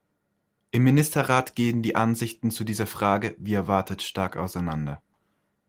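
No technical faults can be heard in this speech.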